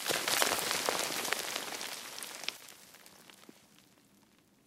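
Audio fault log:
0.35–0.42 s and 2.53–2.59 s, damaged data in a compressed stream: two brief bursts, about 70 ms and 60 ms long, where the sound gives way to a chirp, squawk, click or short hole unrelated to the surrounding material. Corrupted bytes in the encoded stream cause the decoder to misread those frames and lose sync. It misreads or refuses frames until it finds the next valid frame header, and then normal playback resumes.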